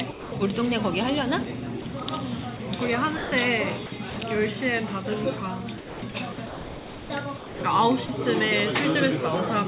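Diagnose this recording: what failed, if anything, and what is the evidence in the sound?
The fault sits in call processing on the sending side. The sound is sound dropped by the voice detector, likely at the sender. The sound gives way to a steady, smooth noise bed at 0.11 to 0.32 s, 2.57 to 2.60 s, 3.17 to 3.32 s, 7.37 to 7.61 s and 8.06 to 8.09 s. Each gap lasts 30 to 240 ms before the real sound returns. The detector judged those moments to be background and stopped sending. The receiver filled the gap with comfort noise.

The same stage also produces sound chopped by the voice detector. This is heard at 1.82 to 2.06 s, 3.86 to 4.16 s and 5.78 to 7.10 s. Within each stretch the sound cuts in and out. The longest stretch loses close to a second in total. The detector likely switched on and off several times, and quieter parts fell below its threshold. The call path's G.711 A-law band limit, with nothing above 4 kHz, is audible throughout.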